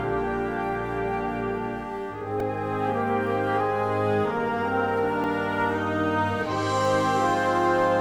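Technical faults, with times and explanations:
2.40 s and 5.24 s, repeated buffer: a 1.33 ms slice replays four times, then once, heard as clicks; waveform shows hard-joined copies, spectrogram thin vertical streaks.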